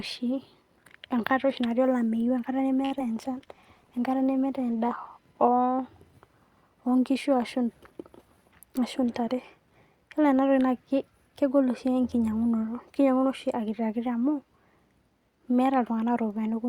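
A speech recording with four network-related faults, three clustered early, then one later. At 2.85 to 2.93 s there is a short stall from a late packet: a packet arrived late, so the receiver held the last sound for 55 ms until it came in, then resumed from the same point. Nothing is lost, but that sound is stretched, and playback delay increases by 55 ms. Right after, at 2.99 to 3.01 s, comes a short concealed packet loss. About 20 ms of audio never reached the decoder, and only a few milliseconds were synthesised from the preceding sound before blending back. The result is a brief smear or wobble where part of a sound drops out, and the delay falls back by roughly 15 ms. From 3.35 to 5.05 s a call bitrate drop takes the encoder from 64 kbps down to 19 kbps, holding the lowest rate for 1.62 s. Opus at that rate codes coarsely and trims high frequencies, so the speech turns muffled and watery until it recovers. 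At 8.44 to 8.83 s a jitter buffer speed-up removes roughly 50 ms in short pitch-period cuts to reduce excess buffering. The speech runs at 112% speed with unchanged pitch and sounds briefly hurried.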